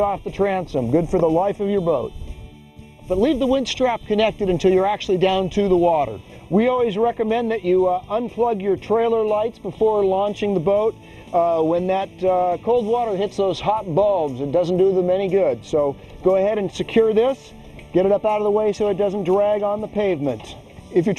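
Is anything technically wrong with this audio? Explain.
Yes. Channel delay (comb filtering) runs through the whole clip. One channel arrives roughly a third of a millisecond late. When the channels are summed to mono, shared content cancels at evenly spaced frequencies. The first notch falls around 1.5 kHz. The result sounds hollow and phasey.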